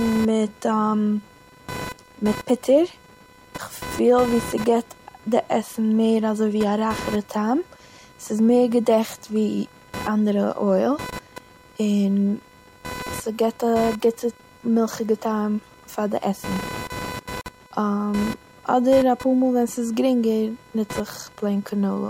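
A speech recording with a buzzing, chirping layer running under it the whole way through, pulsing at around 500 times a second and sitting fairly high, roughly 15 dB below the speech. It rises and falls with the computer's workload rather than with the talking, which marks it as computer activity noise: processor, graphics or mouse load shifting the ground shared with the audio circuit. At 17.41 s the speech drops out for about 48 ms, with its edges smeared by the codec, then picks up exactly where it left off at 17.46 s. This is a gap at a join of encoded pieces, where separately encoded sections were joined without removing each encoder's start delay and end padding.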